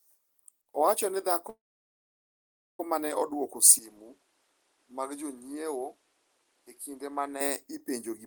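At 1.49 s the speech stalls in a call audio freeze that lasts until 2.80 s. It's likely packets held up in transit and a drained jitter buffer. A brief fading tail gives way to about 1.2 s of silence, then the speech picks up exactly where it stopped, so nothing's lost but everything after runs about 1.3 s late.

From 3.79 s to 7.41 s the input is switched to a poorer device, most likely another microphone or a headset's call profile taking over. There's no gap at the change, but the sound dulls with nothing above 12.5 kHz, drops roughly 5 dB, and carries new background noise sitting about 35 dB under the speech.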